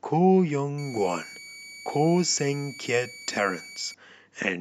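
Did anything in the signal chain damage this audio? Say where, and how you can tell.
Yes: a switching supply whistle got into the analogue stage from about 0.78 s to 3.94 s. A power supply in burst mode radiates or couples a thin tone around 2.25 to 2.28 kHz, drifting slightly, roughly 20 dB below the speech.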